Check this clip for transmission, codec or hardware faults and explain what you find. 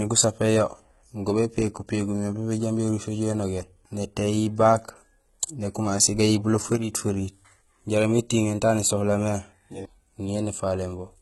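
Two faults are audible in this speech clip: codec damage throughout and a brief level drop from a lost channel.

Throughout, heavy HE-AAC compression is the likely cause. The treble is rebuilt by copying lower bands upward, so sibilants turn gritty and lispy, harmonics misalign above the crossover, and nothing remains above 11.8 kHz. The damage fits a very low bitrate, around 16 kbps.

From 6.76 to 6.93 s, just before "feriit jaraam", one channel drops out. The cause is likely a momentary loss of one stereo channel. After the mono sum, the common content falls abruptly by about 6 dB, producing a short dip in level.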